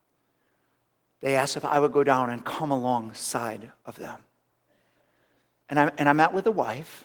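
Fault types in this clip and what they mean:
No faults can be heard anywhere in this recording.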